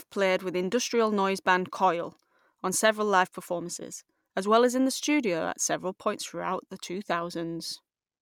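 A speech recording with nothing technically wrong with it.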